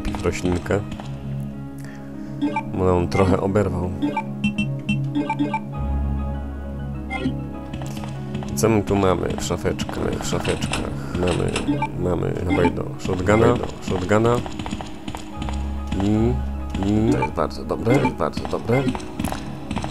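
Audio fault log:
9.98 s to end: doubled audio track, likely from a slower second capture path mixing in. An equally loud, dry copy trails about 0.7 s behind, entering abruptly.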